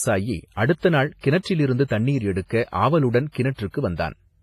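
Throughout the speech there is heavy transform-codec damage, likely WMA compression at a low bitrate around 24 kbps: smeared, ringing, washy detail with hiss breathing alongside the sound. A spectrogram shows nothing above 15.4 kHz and patchy, blocky gaps where weak components vanished.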